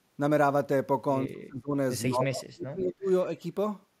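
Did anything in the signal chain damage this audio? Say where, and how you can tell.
Yes. Speech suppressed in double talk damages the call-processing stage at 1.28 to 1.73 s and 2.07 to 3.06 s. The level plunges by up to about 35 dB, likely because the echo canceller mistook overlap for echo. The waveform shows flattened gaps, and the spectrogram shows darkened bands.

An echo leak appears from 2.79 to 2.93 s: a faint copy of the voice trailing by 168 ms, about 20 dB below the speech. It likely reflects incomplete echo cancellation on a loudspeaker side. The spectrogram shows a weak, shifted duplicate of the speech's harmonic pattern.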